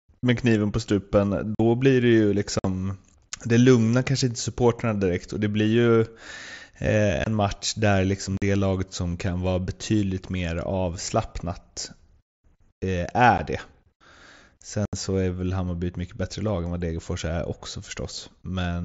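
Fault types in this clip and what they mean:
Unconcealed Bluetooth headset packet loss: voice packets between headset and phone went missing and nothing was generated to fill them, leaving six short, hard-edged holes in the speech at 1.55, 2.59, 7.24, 8.37, 13.38 and 14.85 s, lasting 15 to 75 ms. The first falls just before "blir det ju". Each gap is a multiple of 7.5 ms, which fits whole lost mSBC frames. The wideband link itself carries speech up to 8 kHz with light graininess.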